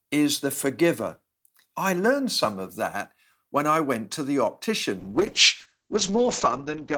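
A call bitrate drop hits this speech recording from 5.01 s to the end: starved of bits, the encoder codes coarsely and removes everything above 8 kHz, leaving rough, muffled sound that fits a fall from 40 to 8 kbps.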